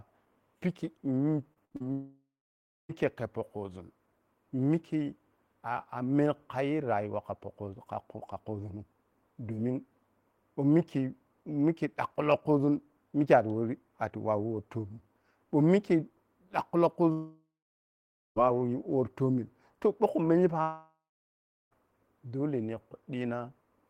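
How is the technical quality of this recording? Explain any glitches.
The recording has clear network faults: one choppy burst early on, then three long gaps.

From 1.53 to 1.82 s there is repeated packet loss (robotic sound). Four short gaps, the longest 56 ms, are patched by repeating sound. That makes about half the span choppy.

At 1.92–2.91 s, 17.12–18.38 s and 20.62–21.88 s the audio smears into a fading buzz, then goes silent for about 0.6 to 0.9 s. A long network dropout is the likely cause.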